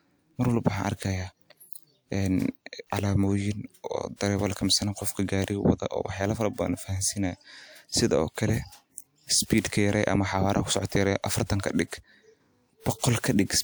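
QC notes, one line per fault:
4.16 to 4.21 s and 9.46 to 9.50 s, pre-echo: just before a sharp onset in the speech there's a short hiss, spread across about 44 ms the first time and 41 ms the second. The codec sized its quantisation noise for the loud attack but spread it over the whole transform block, so that noise leaks into the quiet gap ahead of the onset. The attack itself comes across softened and smeared instead of crisp.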